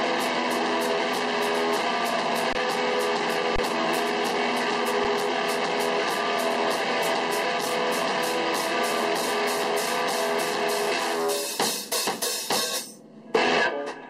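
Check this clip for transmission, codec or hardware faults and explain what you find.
Three short underruns with held sample occur, at 2.53 to 2.55 s (about 21 ms, consistent with a 1024-sample gap), 3.56 to 3.58 s (about 25 ms) and 5.04 s (about 5 ms). Each time the output buffer ran dry and the converter froze on its last value, so the waveform goes flat and the sound simply stops with little or no click. Nothing seems lost, so playback resumes where it paused, with only a soft restart. Unlike a dropout to digital silence, which snaps to zero and clicks, these stall quietly at a held level.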